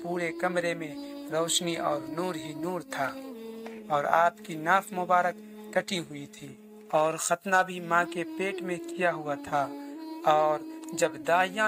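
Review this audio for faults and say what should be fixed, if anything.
A buzz at 50 Hz runs through the whole clip, present only while there is signal. It comes from a resampler restarted on every block. The artefact pattern points to a 44.1 kHz to 48 kHz conversion done on 20 ms blocks, each processed in isolation, so the filter lacked true neighbouring samples at every block edge and left a small error there. On a spectrogram this shows as faint vertical lines every 20 ms with energy stacked at multiples of 50 Hz. The waveform shows tiny discontinuities at the same spacing. To prevent it, keep the resampler's filter state and history running continuously from one block to the next instead of resetting it per block.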